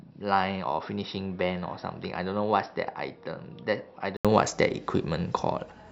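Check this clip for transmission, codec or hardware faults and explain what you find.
One fault is present. From 0.0 to 4.25 s the speech is dull and band-limited, with nothing above 5.6 kHz. It is also about 10 dB quieter, with a faint new noise floor. An 80 ms gap follows before full clarity returns. The likely cause is an input switched to a poorer device with a narrower band. A codec bandwidth drop would not also shift the level and background noise.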